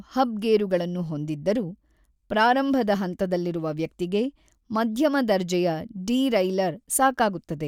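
Speech, with nothing technically wrong with it.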